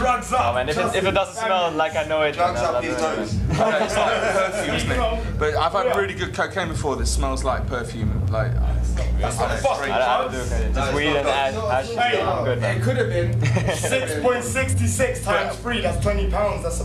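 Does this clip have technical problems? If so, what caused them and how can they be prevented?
Yes. Word clock ticks run from 0.48 s to 16.48 s, sharp clicks of uneven strength about every 0.4 s, around forty in all. A receiver on its own clock, unlocked to the sender, periodically drops or repeats a single sample as the clocks drift, a rate pointing to roughly 50 ppm offset. A spectrogram shows evenly spaced thin vertical lines across all frequencies, and a zoomed waveform shows one-sample steps. Preventing this means locking the receiving device to the incoming digital clock or to a shared word clock.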